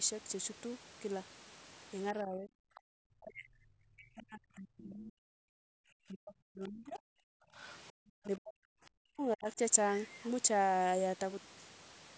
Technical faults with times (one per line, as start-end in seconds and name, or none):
2.13-7.01 speech suppressed in double talk
2.75-2.80 other side's voice leaking through
7.31-7.55 background gated by the echo canceller
7.56-7.79 other side's voice leaking through
7.99-8.77 speech suppressed in double talk
9.03-9.59 speech suppressed in double talk